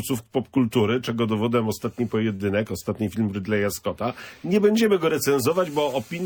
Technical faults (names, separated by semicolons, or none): short stall from a late packet